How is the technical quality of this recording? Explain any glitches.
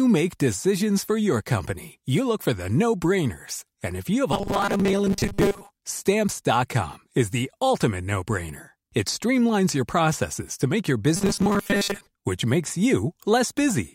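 The speech twice turns into a rigid, metallic buzz, from 4.32 to 5.70 s and again from 11.17 to 12.07 s, between "processes to make your" and "which makes". This is robotic sound from repeated short buffers. A fixed 200 Hz drone runs through it while the words stay loosely traceable. The likely cause is audio arriving too seldom, with a roughly 5 ms slice repeated to fill most of the gap, skipping the real audio.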